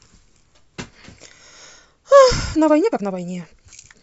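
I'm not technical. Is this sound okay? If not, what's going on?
No, not quite. From about 2.51 s to the end, the speech suddenly rushes along at nearly twice its normal pace (about 1.95 times) while the pitch stays the same, so it sounds hurried. That's a time-stretched section, likely software squeezing the audio by dropping tiny pieces.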